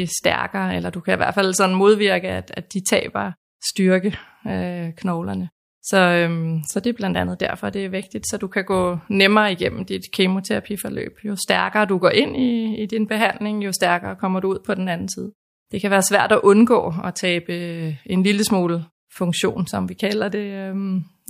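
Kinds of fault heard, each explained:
No faults are audible anywhere in this speech recording.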